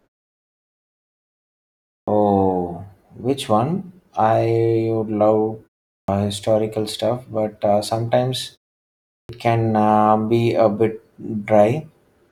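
At 2.0, 6.01 (after "one I would love") and 9.21 s (before "can uh be a"), a clipped start after a pause swallows about 72 to 82 ms as the output wakes. Speech bursts out abruptly, the waveform jumping from flat to full level and the spectrogram missing its onsets.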